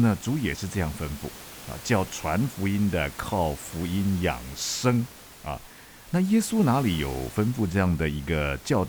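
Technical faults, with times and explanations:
No technical faults detected.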